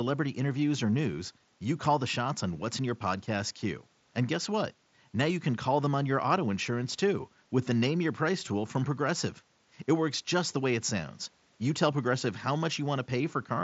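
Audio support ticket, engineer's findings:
No faults found in this speech clip; the Bluetooth mSBC headset codec path is working normally.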